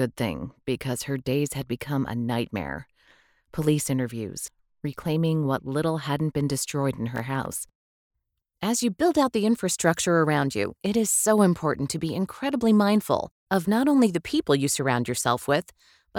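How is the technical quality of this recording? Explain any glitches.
The recording has one clear fault, a burst of processor overload crackle from 7.16 to 7.80 s. For about two-thirds of a second the processor could not finish its small audio buffers on time, and around ten of those deadlines, each covering only a few milliseconds of sound, were missed. Every miss dropped a sliver of silence into the signal with an abrupt edge on each side. Strung together, these tiny dropouts produce a gritty, tearing crackle over the sound that stops once the load eases.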